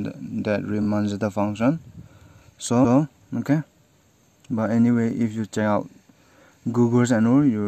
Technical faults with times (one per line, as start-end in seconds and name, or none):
0.81-0.86 repeated frames
2.83-2.97 repeated frames
5.90-5.99 repeated frames